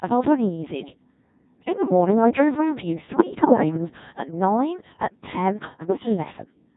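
Codec 2 vocoding runs through the whole clip: the speech is rebuilt from pitch, voicing, energy and a spectral envelope and synthesised from sine waves, so the original waveform is gone. The heavy robotic buzz fits the 1.6 kbit/s mode.

Bit errors on digital voice radio hit from 3.12 to 3.78 s and from 5.88 to 6.05 s. Corrupted bits, around 4 and then 7 percent, scramble each frame's pitch, level and spectrum, so the voice jumps and breaks into warbling, bleeping gibberish.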